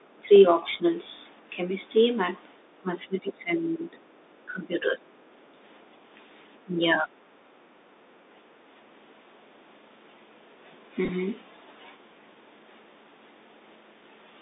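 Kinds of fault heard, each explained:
Bluetooth CVSD headset codec, throughout: the sound is confined to a narrow telephone band of roughly 250 Hz to 3.7 kHz, with nothing above it. The damage is plainly audible. The coder sends a single up-or-down bit per sample and adapts its step size, so loud, bright moments outrun the step and smear. Sibilants turn scratchy and a grainy hiss sits underneath, all consistent with a 64 kbit/s CVSD link.
Speech suppressed in double talk, 0.0–0.26 s, 0.78–0.84 s, 2.81–3.96 s, 4.46–5.07 s and 6.65–7.1 s: the level sags in these stretches. It dips by about 20 dB at the first and third, about 15 dB at 4.46 and 6.65 s, and only slightly around 0.8 s. The likely cause is an echo canceller that could not tell the talker apart from returning loudspeaker sound and pulled everything down while both sides were active.
Other side's voice leaking through, 0.34–0.39 s and 3.27–3.61 s: a faint second voice slips in underneath, around 20 to 25 dB below the main speech. 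The first is a brief scrap and the second a longer trace. Most likely the far end was playing on a loudspeaker, and the canceller failed to strip all of it from the microphone pickup. The second instance lands inside the suppressed stretch from 2.81 s.
Bluetooth headset packet repeated, 11.05–11.09 s: a short rough, buzzy patch appears here. About 19 ms of audio is affected across a span of roughly 38 ms, with the longest unbroken run near 10 ms. That fits around five voice packets lost between headset and phone. In each gap the chip decoded the previous packet's bits again, and the brief 3.75 ms repetitions give the sound its buzzy texture.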